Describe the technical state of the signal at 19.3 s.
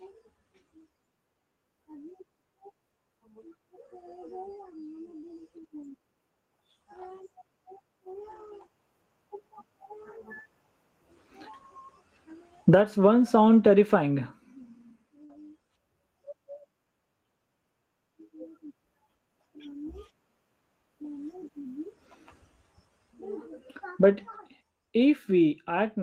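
At 19.3 s the speech signal is intact, with no dropout, clipping, distortion or other fault audible at that moment.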